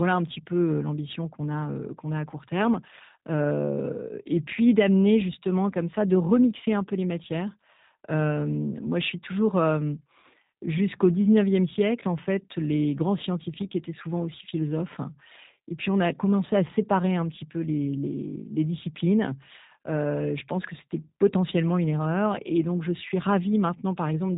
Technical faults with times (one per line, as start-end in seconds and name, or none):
0.00-24.37 G.729 codec